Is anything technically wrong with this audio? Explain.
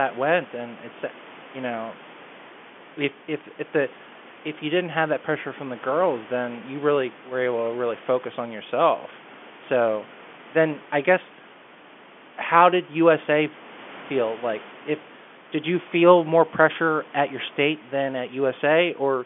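No, nothing is technically wrong.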